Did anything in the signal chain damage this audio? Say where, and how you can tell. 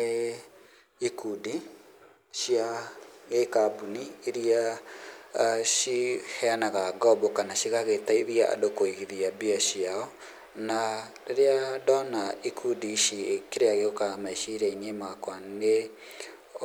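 No, I can't hear any damage from the signal chain.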